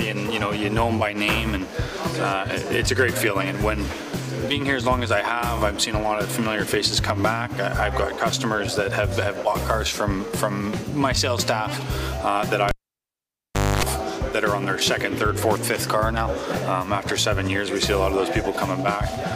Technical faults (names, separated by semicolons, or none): cable pulled and plugged in